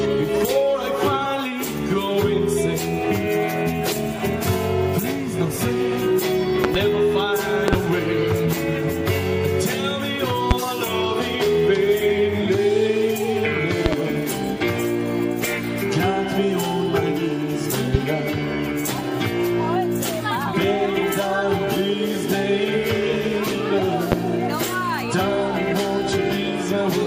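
At 6.64 to 6.78 s, 7.68 to 7.76 s, 10.51 s, 13.86 to 13.95 s, 17.94 s and 24.12 s there's a loud pop, doubled at the first, second and fourth, jumping well above the sound, which carries on underneath. A likely voltage spike, say a switch or static, got into the signal.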